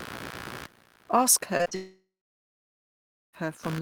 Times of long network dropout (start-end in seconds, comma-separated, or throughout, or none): 1.75-3.35